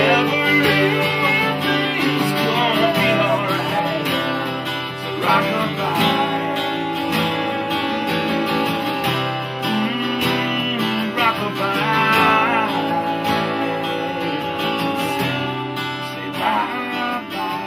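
GSM phone buzz runs from 2.99 to 3.80 s. A nearby 2G phone, here in the middle of a data transfer rather than a call, transmits in bursts about 217 times a second, and the audio circuitry rectifies those radio pulses into the signal path. The result is a raspy 217 Hz buzz rich in harmonics, sitting about 25 dB below the signal and unrelated to it, which appears for this short stretch and then stops.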